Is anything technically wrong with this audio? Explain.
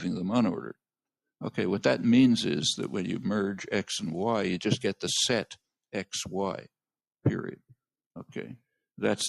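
No, nothing technically wrong is audible anywhere in this recording.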